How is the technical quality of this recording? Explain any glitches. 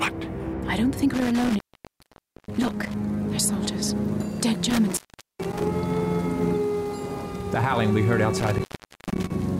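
The recording has an intermittent contact fault. A loose cable or plug opens three times, at 1.14 to 2.94 s (about 0.89 s open), 4.70 to 5.63 s (0.42 s), and 8.40 to 9.30 s (0.49 s), and each time the sound drops out between crackles, leaving faint hiss.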